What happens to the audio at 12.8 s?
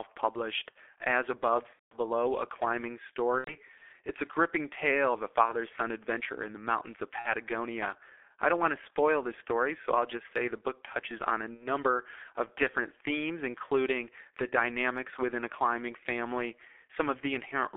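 At 12.8 s the speech carries heavy G.723.1 codec damage, present throughout the clip. The audio is squeezed into a 300 Hz to 3.5 kHz telephone band, and its sluggish 30 ms frame-based voice model, fitting roughly 6 kbit/s, leaves it muffled and hoarse with smeared consonants.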